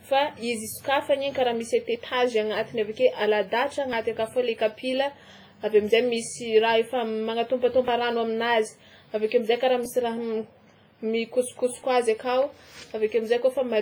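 Throughout the speech there is heavy codec damage: ringing, washy quantisation noise smeared over tens of milliseconds and a hiss that breathes with the signal. This is likely WMA compression at a low bitrate, around 24 kbps. The smearing is what sets it apart from plain background noise.

At 1.96, 3.93, 5.91, 7.88, 9.86 and 11.83 s, the audio skips forward by a few tens of milliseconds, with the two sides butted together and no gap. The regular spacing, about every 2 s, points to audio missing between chunks rather than random packet loss.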